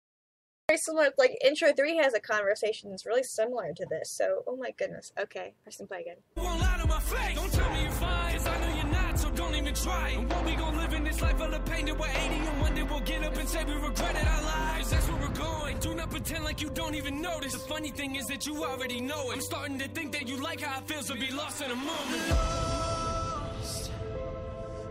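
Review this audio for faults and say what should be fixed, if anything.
A cut-off start affects the opening. The clip holds digital silence from 0.0 to 0.69 s. At 0.69 s the sound begins mid-event, with no natural attack or fade-in. Capture started late and missed the onset. To prevent it, start recording before the source begins.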